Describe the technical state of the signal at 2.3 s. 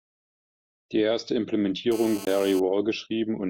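A nearby 2G phone on a call is pulsing its transmitter 217 times a second, and the audio circuit rectifies those pulses. The result is GSM phone buzz, a hard, raspy 217 Hz tone with many harmonics, steady from 1.92 to 2.60 s at about 16 dB below the speech. Just before 2.3 s, a CD skip from 2.25 to 2.27 s makes the laser jump tracks, so the audio mutes for about 20 ms and resumes from a different point on the disc.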